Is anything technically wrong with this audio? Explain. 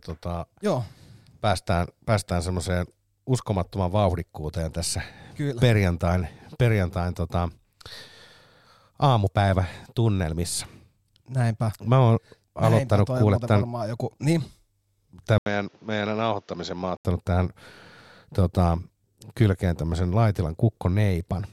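Yes. From 15.38 to 17.05 s the speech turns dull and boxy. It likely comes from the input switching to a poorer device. A gap of about 80 ms of silence marks the switch. The new path carries nothing above 7.3 kHz, so the top end disappears. Its own background noise sits roughly 35 dB below the speech. The level also drops by a few decibels. At 17.05 s the fuller sound returns.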